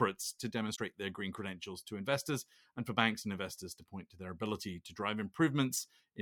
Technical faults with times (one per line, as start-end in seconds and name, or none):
0.72-0.79 damaged data in a compressed stream